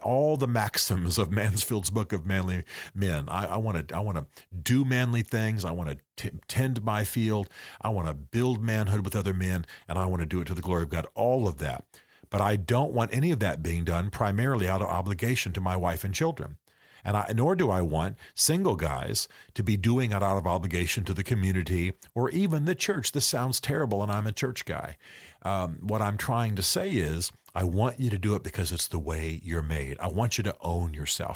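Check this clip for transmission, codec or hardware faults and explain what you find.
No faults detected in this clip.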